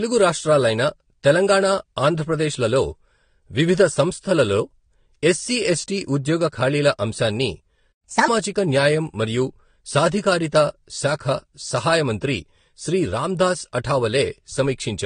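Right from the start the speech has nothing above 9.7 kHz, which sounds like likely transcoding between lossy codecs, with an AAC-style pass at a low bitrate followed by Vorbis at a similarly low rate. The second encoder spends its bits re-coding the first one's artefacts, so both sets of artefacts are heard together.

At 7.92 s the sound simply drops out for 120 ms until 8.04 s, a playback stall where the player likely ran dry of data or got blocked. It then resumes from exactly where it cut off.

From 8.04 to 8.28 s there's a catch-up at higher speed. The player pushes the backlog through at 1.5 times normal speed, so pitch jumps up by roughly a fifth and the speech sounds chipmunky, then everything snaps back to normal.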